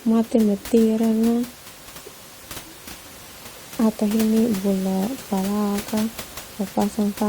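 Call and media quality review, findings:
Overlap between stream segments at 2.23 s: brief skip in the speech at a 4 s segment boundary, where overlapping timestamps made the player trim about 17 ms, so the waveform jumps.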